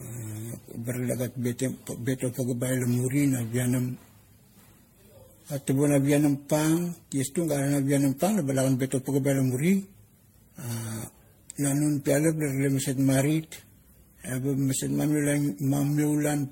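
From start to finish the speech carries generation loss: a swirly, smeared, hollow texture with blurred consonant attacks and nothing above 16.5 kHz. The likely cause is repeated lossy re-encoding, around ten passes through an MP3 chain whose character fits 64 kbit/s. Each pass quantises on a shifted frame grid, so noise and spectral gaps accumulate, making the damage sound worse than a single encode at that rate would.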